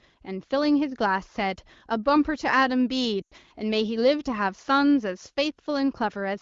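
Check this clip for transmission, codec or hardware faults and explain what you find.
One transmission fault stands out.

Lost AMR speech frames, 3.21 to 3.33 s: the wideband decoder stretched the last good frame with falling gain, so the speech drops to near silence within two frames, and 100 ms of speech is lost.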